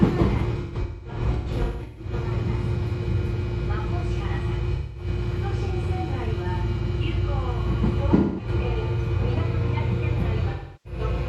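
Four patches of AAC frame loss with concealment turn up, at 0.61 to 2.13 s, 4.75 to 5.07 s, 8.16 to 8.48 s and 10.50 to 11.00 s. The decoder lost chunks and papered over them by re-using the last good spectrum, so you hear smeared, noisy, phasey stretches rather than clean dropouts. The first is the roughest: about 0.94 s lost in bursts across 1.5 s, the longest run around a fifth of a second.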